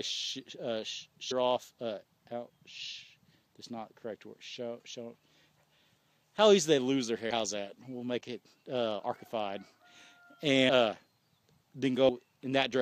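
At 1.30, 10.68 and 12.08 s, compressed frames are skipped. Whole frames of about 23 ms go missing, so the audio jumps ahead roughly 100 to 150 ms.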